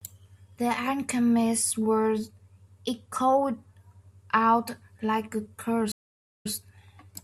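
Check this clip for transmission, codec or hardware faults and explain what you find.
One fault is audible, a stream reconnect. From 5.92 to 6.51 s the speech cuts out. The connection broke, and 496 ms of silence follows while the player reconnects. A fresh decoder then starts, and the speech resumes 96 ms earlier, briefly repeating itself.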